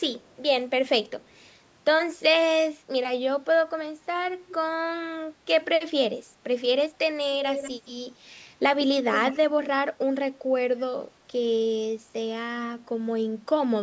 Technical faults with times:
0.20-0.34 echo leak
4.48-4.55 echo leak
7.41-7.91 echo leak
9.10-9.37 echo leak

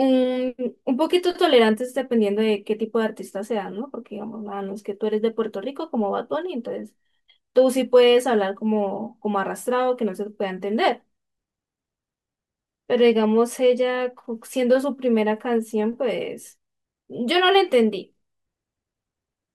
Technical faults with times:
none

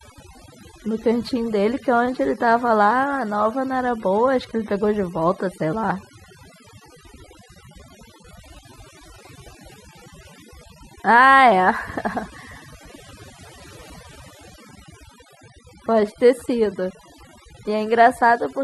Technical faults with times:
0.00-18.63 overdone noise removal

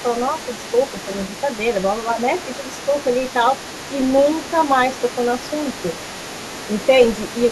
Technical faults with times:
0.00-7.51 other side's voice leaking through

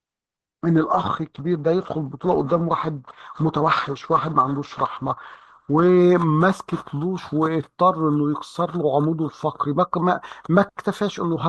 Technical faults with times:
0.00-6.00 adaptive stream starting at a low bitrate

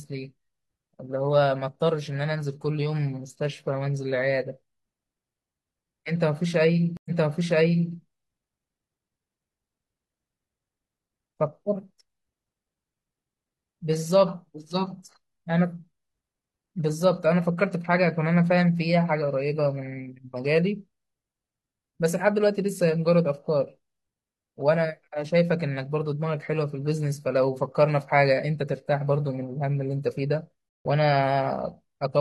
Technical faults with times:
6.97-7.93 stream reconnect
30.69-30.86 stream reconnect

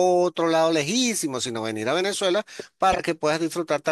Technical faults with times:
2.92-2.99 frames out of order

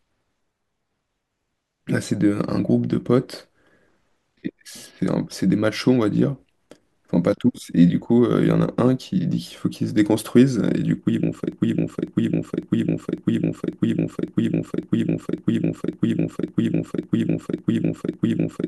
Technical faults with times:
11.52-18.68 broken-record loop

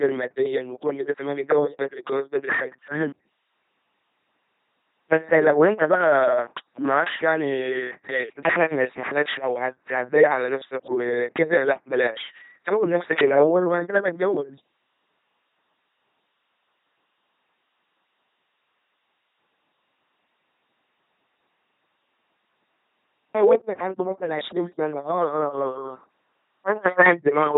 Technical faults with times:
0.00-27.58 LPC-10 vocoder

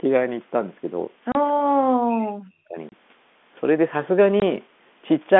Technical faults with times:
1.32-1.35 packet loss filled with silence
1.61-2.77 speech suppressed in double talk
2.89-2.92 packet loss filled with silence
4.40 packet loss filled with silence

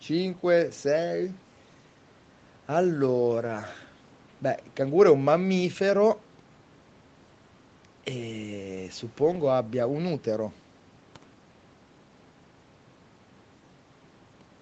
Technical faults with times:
none

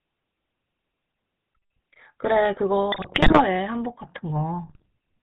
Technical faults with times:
0.00-5.22 GSM full-rate codec
2.92-3.42 GSM bit errors
4.67-4.86 GSM bit errors

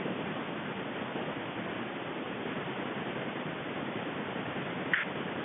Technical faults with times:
none

